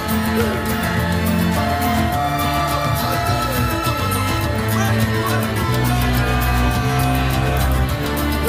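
No technical faults can be heard anywhere in the clip, so there is nothing to describe in time order.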